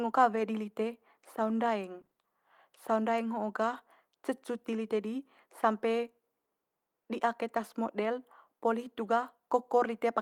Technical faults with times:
0.35-0.41 lost packet rebuilt from error correction
2.01-2.25 repeated packet loss (robotic sound)
3.73-3.79 lost packet rebuilt from error correction

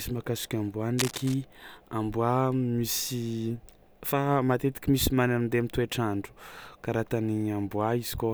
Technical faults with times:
0.98-1.37 cable scratch noise

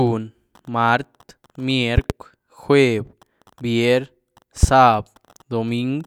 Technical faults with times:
1.98-2.13 loud pop
4.63-4.66 loud pop

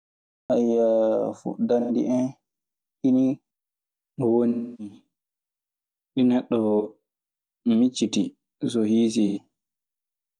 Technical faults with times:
0.00-0.50 cut-off start
1.80-1.90 AAC frame loss with concealment
4.49-4.94 AAC frame loss with concealment
6.80-6.87 AAC frame loss with concealment
9.27-9.38 AAC frame loss with concealment

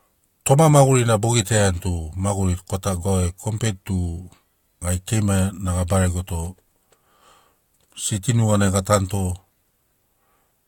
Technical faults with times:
none

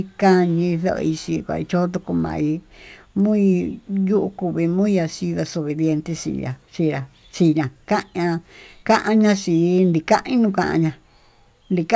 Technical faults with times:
2.20-3.70 resampler restarted on every block

